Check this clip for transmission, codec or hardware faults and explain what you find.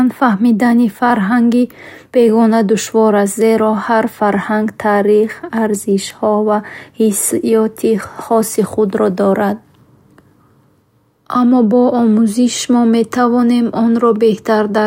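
No faults can be heard anywhere in this speech recording. There is nothing to flag at any point along its length.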